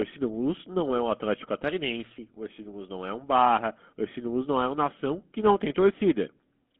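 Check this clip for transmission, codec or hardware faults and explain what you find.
One fault runs through the entire clip: GSM full-rate codec damage. The speech sounds plainly buzzy and gravelly, and thin, confined to a 150 Hz to 3.5 kHz line band. The codec rebuilds the voice from a vocal-tract model driven by sparse, regularly spaced pulses, a coarse scheme that fits a 13 kbps stream.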